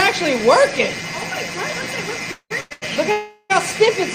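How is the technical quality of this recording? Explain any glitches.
The recording has four timing glitches, clustered between 2.31 and 3.52 s, where the audio halts and then resumes without losing anything.

Call audio freezes occur at 2.31–2.52 s, 2.60–2.73 s and 3.12–3.52 s. The likely cause is packets held up in transit, which left the jitter buffer empty. The receiver carried the last sound forward as a fading buzz or hiss for about 190 ms, 100 ms and 380 ms, and the first freeze ends in 60 ms of silence. Unlike a dropout, playback resumes exactly where it stopped, adding delay equal to each gap.

A short stall from a late packet follows directly at 2.73–2.84 s. One packet missed its slot, so the final sound was stretched for 90 ms with a slight buzz or dip until it arrived. It is briefer than the freezes, with no fade toward silence.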